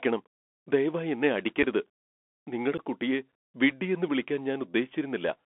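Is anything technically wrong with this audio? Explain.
Yes, two things. The whole clip has the sound of a Bluetooth CVSD headset codec. The speech is squeezed into roughly a 250 Hz to 3.4 kHz band, with a grainy hiss underneath and scratchy s sounds. That fits a 64 kbps CVSD link, which codes one up-or-down bit per sample with an adapting step that can't keep up with sharp, loud high content.

There's also unconcealed Bluetooth headset packet loss, twice. At 1.63 s, right after "ദയവായി എന്നെ", about 7.5 ms drops out, which fits a couple of lost packets. From 2.78 to 2.80 s, just before "കുട്ടിയെ വിഡ്ഢിയെന്ന് വിളിക്കാൻ", about 11 ms goes, which fits around three. Nothing fills the gaps, so each one is a tiny hard-edged hole.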